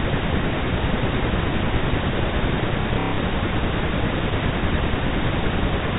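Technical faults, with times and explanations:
2.82 to 3.18 s, packet loss with last packet repeated: About 210 ms of audio went missing in scattered gaps over 360 ms, the longest lasting 120 ms. Each gap was filled by replaying the last packet received. The repeats ignore the speech's pitch cycle. The longer run buzzes at roughly 33 Hz, which fits 30 ms packets. The result is a brief robotic stutter within the G.711 telephone band, which stops at 4 kHz.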